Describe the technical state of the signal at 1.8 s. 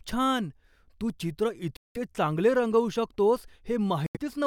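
At 1.8 s the speech drops to silence for about 185 ms (1.77–1.97 s), then resumes mid-flow before "चांगले रंगवू शकतोस", likely a Bluetooth stall.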